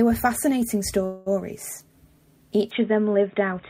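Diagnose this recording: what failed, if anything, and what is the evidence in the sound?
From 1.05 to 1.28 s the sound stalls into a fading buzz lasting about 207 ms, then picks up exactly where it left off. This is a call audio freeze at the network stage, likely a jitter buffer running dry while packets were delayed. The receiver filled the wait rather than dropping anything, so no audio is lost and everything after is pushed back by about 207 ms. Packet loss concealment would differ: its covered-over patches replace missing audio rather than insert extra time.

At 2.71 s the sound turns dull and boxy through to the end, with nothing above 3.8 kHz and a new background noise about 35 dB below the signal. There is no gap and no level jump at the change. This points to an input switched to a poorer device at the capture or driver stage, likely a fallback to a headset's call profile. A codec bandwidth drop would narrow the band too, but it would not bring in a fresh noise floor with its own character.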